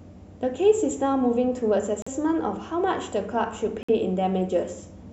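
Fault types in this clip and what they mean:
Bluetooth stall: The speech cuts to dead silence twice, for about 43 ms at 2.02 s and 55 ms at 3.83 s, then carries on. That's likely a wireless link where packets got held up, the headphone buffer emptied, and playback waited for the resends.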